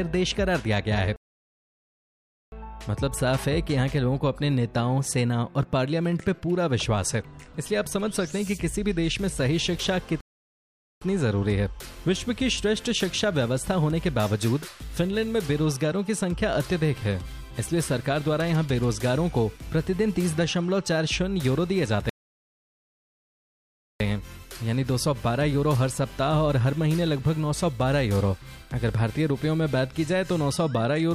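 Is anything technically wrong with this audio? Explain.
Yes, there are three playback stalls, at 1.16 to 2.52 s, 10.21 to 11.02 s and 22.10 to 24.00 s. The sound cuts out for about 1.4 s, 0.8 s and 1.9 s before resuming, most likely because the player ran dry or got blocked.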